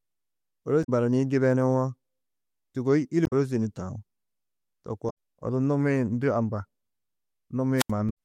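Speech with damaged data in a compressed stream at 0.83–0.89, 3.23–3.33, 5.09–5.11 and 8.09 s: corrupted frames make the decoder lose sync. A wireless microphone squelch dropout at 7.77–7.91 s is different, with hiss rising and then an 80 ms hole of near silence as the receiver mutes a fading radio signal.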